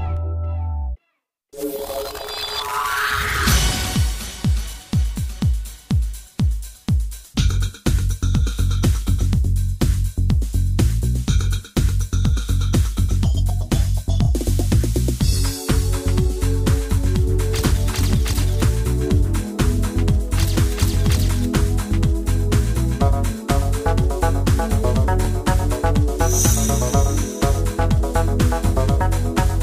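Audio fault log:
No faults heard.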